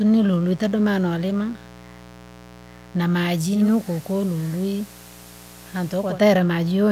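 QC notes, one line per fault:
Throughout: mains buzz, a steady raspy 60 Hz buzz sitting roughly 25 dB under the speech. It isn't a smooth hum, because something like a dimmer, rectifier or a gap in the shielding is letting sharp switching spikes in twice every mains cycle. Those spikes carry harmonics of 60 Hz well up into the kilohertz range, which gives the buzz its edge.
3.44 to 6.23 s: digital radio blending to analogue. The receiver drops its digital stream and cross-fades over about 0.3 s to the station's FM broadcast, then fades back near the end. On the FM stretch hiss comes up, roughly 25 dB below the speech, and the level sinks by about 1 dB. That shift in noise and level is what gives the switch away.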